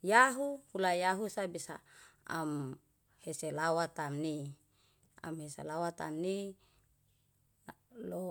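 No technical faults can be heard anywhere in this speech recording. There is nothing here to place on a timeline.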